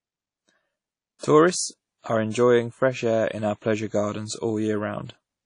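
From the start, the speech sounds washy and ringing, with nothing above 10.1 kHz. This is likely WMA compression, fitting a low bitrate near 32 kbps.

From 1.19 to 1.23 s comes pre-echo. About 46 ms of hiss leads a sharp attack, which sounds soft and smeared.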